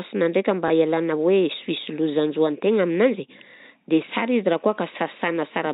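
At 0.68 s a small blip: packet loss with the last packet repeated, one 20 ms packet replayed over the telephone-band G.711 audio.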